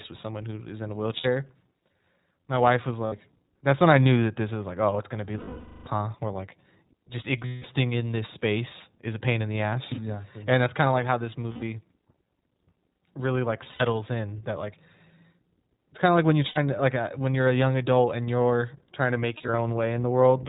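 Speech coded with the iLBC codec throughout, and the damage is plainly audible: everything above 4 kHz is gone, leaving a narrowband, slightly rough and synthetic voice. On a spectrogram the energy stops flat at 4 kHz. The bitrate and frame rhythm suggest iLBC's 15.2 kbps mode with 20 ms frames. Lost iLBC frames interrupt it eight times: 1.18–1.26 s, 3.06–3.14 s, 5.38–5.88 s, 7.46–7.65 s, 11.52–11.64 s, 13.64–13.82 s, 16.48–16.58 s and 19.38–19.59 s. Each gap is filled by a held, buzzy vowel as the decoder repeats the last pitch cycle with added noise. The longest, about half a second at 5.4 s, fades as concealment runs on. The losses at 13.6 s and 19.4 s come in short scattered bursts, the longest around 70 ms and 20 ms. On a spectrogram the concealed stretches show as smeared, repeating harmonic bands. On the waveform they look like periodic, decaying patches. Because each iLBC frame decodes on its own, the voice is right again almost at once after every gap.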